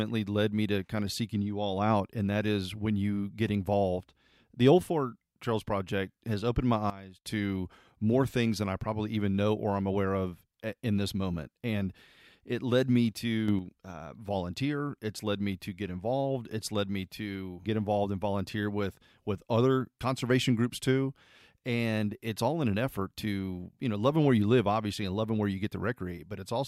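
A gain setting was most likely applied without a ramp, so the digital level stepped between adjacent samples. The sudden gain jump hits twice in this speech. At 6.90 s, after "has opened my", the level drops by about 16 dB until 7.25 s, just before "to more things than". At 13.48 s, after "it led me", it rises by about 6 dB until 13.59 s, before "uh volunteer". Speech and background noise shift together, abruptly.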